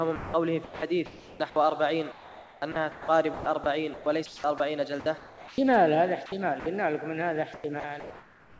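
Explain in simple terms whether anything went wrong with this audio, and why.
Sound chopped by the voice detector, from 0.16 to 1.40 s, from 2.12 to 5.58 s, and from 6.26 to 6.66 s: in these stretches the audio keeps cutting in and out. The likely cause is the sending side's voice detector repeatedly deciding that quieter parts were just background and briefly stopping, so the receiving side filled those gaps with artificial noise. About 0.7 s, 1.6 s and 0.12 s were replaced in each stretch.

Comfort noise in place of the background, from 7.54 s to the end at about 8.6 s: here the natural background gives way to an even, featureless hiss with none of the original detail. This is likely because the sender stopped transmitting once it judged nothing worth sending was present, and the receiver played made-up noise, shaped roughly like the background, to avoid dead silence. Roughly three quarters of a second of the real background is lost this way.

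Sound dropped by the voice detector, from 7.80 to 7.84 s: a tiny piece of the actual sound disappears and is swapped for that same steady hiss. The likely reason is the detector mistaking a faint bit of sound for background and cutting it. It's very short, but the sound briefly vanishes rather than fading naturally. The whole clip also lacks anything above 8 kHz, which is simply how this call connection carries audio.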